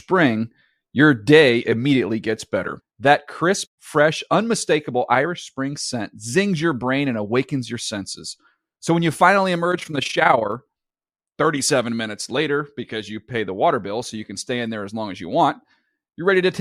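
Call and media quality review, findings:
Overlap-add ripple, 9.72–10.52 s. Fast, rough tremolo on the speech. Level swings about 11 dB at around 30 Hz. Probable component: frame-based processing stage (resynthesis/enhancement). Mechanism: analysis/synthesis windows overlap without summing to constant gain, so gain dips once per frame. Distinguisher: steady, periodic level flutter locked to the frame rate. No dropouts, clicks or pitch change, unlike packet loss or jitter.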